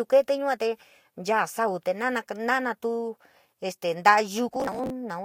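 Right near the end, from about 4.49 to 4.90 s, the speech breaks into processor overload crackle. The processor couldn't keep up, so a long run of audio buffers missed their deadlines and each missed one was simply skipped, leaving a tiny hard-edged hole. The grain of the crackle fits buffers of around 10 ms, with a few dozen dropped back to back. You hear it as gritty tearing over the sound that clears once the load eases.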